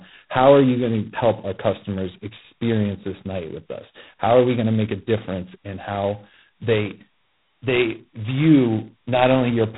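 All the way through, the speech has that G.726 ADPCM grit: nothing above 3.9 kHz, plus a harsh rasping hiss riding its level, which fits 16 kbit/s.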